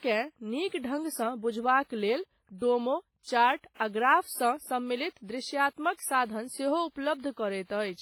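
Heavy WMA compression runs throughout the speech, likely from a low-bitrate transform encoder near 24 kbps. Quantisation noise smears over long blocks, sounding ringing and washy with breathing hiss.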